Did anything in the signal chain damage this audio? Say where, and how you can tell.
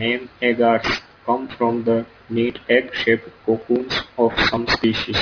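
Yes. There's aliasing across the whole clip, and it comes from the sample-rate conversion stage. The speech sounds gritty and metallic on the sibilants, and the spectrum runs hard up to a band edge at 5.5 kHz. That points to a downsample from 44.1 kHz to about 11 kHz with no low-pass filter in front of it. Everything above 5.5 kHz folded back down into wrong, unrelated frequencies, and the folded energy is strong, only about 10 dB under the speech.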